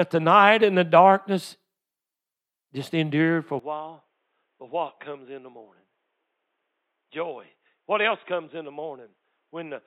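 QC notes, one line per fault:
3.59 s to the end: input switched to a poorer device. Right after "just endured for a" the speech goes dull and boxy, nothing above about 3.8 kHz, roughly 10 dB quieter, with a faint new noise floor. It's likely a mid-take switch to a narrower-band mic, with no gap.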